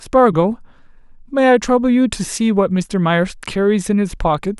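Nothing in this short speech recording stands out as a technical fault, with no dropouts, glitches or distortion turning up anywhere along the way.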